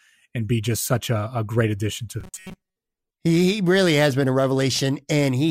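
From 2.21 to 2.76 s the speech turns into robotic sound from repeated short buffers: a rigid, metallic 188 Hz buzz over most of that span, likely from a roughly 5 ms block being replayed while fresh audio was skipped. A waveform shows identical repeating cycles, and a spectrogram shows evenly spaced harmonic lines.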